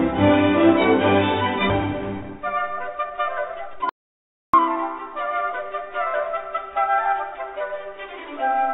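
Skip ahead at 1.70 to 1.72 s: roughly a second of audio was discarded while later audio waited, so playback lurches forward with almost no gap at the join.

Jitter buffer speed-up from 2.21 to 5.62 s: to shed excess buffered delay, short pitch-period slices were repeatedly cut, removing about half a second. The sound runs at 116% speed with unchanged pitch and feels hurried.

Audio dropout to silence from 3.89 to 4.54 s: 0.64 s of input vanished, likely from a lost link or device, leaving silence with no room tone. The sound cuts out mid-flow and resumes abruptly.

Through all of this, the call path's band limit leaves nothing above 4 kHz, which fits G.711 mu-law at 64 kbps.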